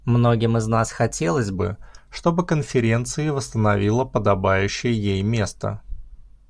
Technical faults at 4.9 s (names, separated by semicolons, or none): wrong sample rate